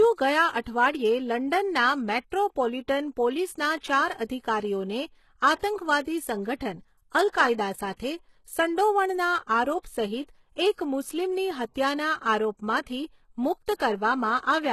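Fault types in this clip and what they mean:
HE-AAC compression: The whole clip sounds like it was likely coded as HE-AAC at a low rate near 16 kbps, with the codec damage plainly audible. Only the lower band is truly coded, and the treble above it is rebuilt by copying lower bands upward under a coarse envelope, so s sounds lose their natural detail. On a spectrogram the energy stops dead at 12.3 kHz, and the replicated band shows copied patterns that fail to align harmonically with the band below.
Pre-echo: The codec spreads its quantisation noise across a whole block, so when a sharp attack comes late in one, the quiet moment before it fills with hiss. Here that happens five times, at 0.61, 3.80, 6.01, 10.73 and 13.75 s, each smear lasting 32 to 57 ms before the onset, leaving attacks softened. On a waveform a low noisy ramp precedes each transient, and a spectrogram shows a broadband haze just ahead of the attack.
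Sample clock jitter: From 11.42 to 13.46 s the converter clock wanders by around a microsecond, so samples land slightly early or late and the error follows the waveform's slope. The result is a roughness about 45 dB below the signal, rising with loud and high-frequency content and vanishing in pauses. On a spectrogram it appears as a noise floor that lifts under strong high-frequency energy; a waveform shows little.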